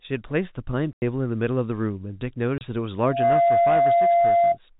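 Speech carried over a G.711 telephone link, with two faults. In the packet loss filled with silence, dropped packets were replaced by silence, punching hard-edged holes at 0.93–1.02 s (90 ms) and 2.58–2.61 s (30 ms), lengths that fit 30 ms packets. In the loudspeaker feedback squeal, the microphone picked up its own loudspeaker and the loop ran away at 688 Hz, a tone that swells within about a third of a second to roughly 10 dB above the speech and lasts from 2.97 to 4.58 s.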